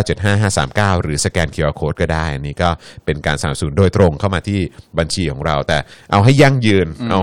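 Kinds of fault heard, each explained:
Hard clipping: throughout the speech, the signal is driven about 5 dB past what a stage in the chain can pass, so the highest peaks are sliced off flat. Under one percent of samples reach that ceiling, so the damage sits on the loudest moments rather than smearing every sound. There the squared-off tops add harmonics high in the spectrum, heard as brief crackle and a gritty edge on peaks.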